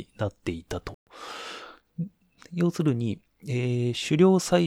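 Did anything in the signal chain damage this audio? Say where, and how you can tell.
Yes. The speech drops out to dead silence from about 0.94 to 1.07 s, a gap of roughly 125 ms, and then carries on from where it left off rather than fading or smearing. That clean stop-and-resume is the signature of a Bluetooth stall at the wireless link and playback buffer stage. Radio interference likely delayed packets long enough for the headphones' buffer to empty, so output paused until the retransmitted audio caught up.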